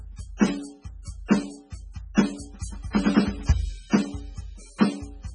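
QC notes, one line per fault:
Throughout, MP3 compression: the music has a hard ceiling with nothing above 10.2 kHz, and the whole band sounds watery and swirly. The damage is heavy and fits a bitrate of around 16 kbps. At that rate the encoder likely ran short of bits. It dropped the treble at a fixed cut-off and zeroed weak frequency lines. Those lines flicker on and off between frames, which gives the swirl and smears attacks.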